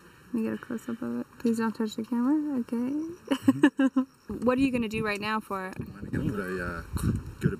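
Channel delay with comb filtering runs throughout: one side lags roughly 0.7 ms, so the mono sum notches from around 700 Hz up, leaving things hollow and phasey.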